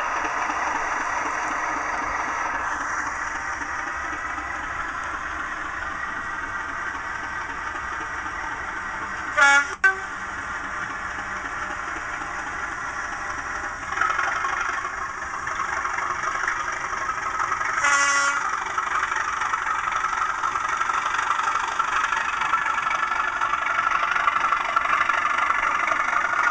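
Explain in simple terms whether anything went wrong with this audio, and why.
Nothing went wrong with this audio; the signal stays intact and steady throughout, with no technical problem anywhere in it.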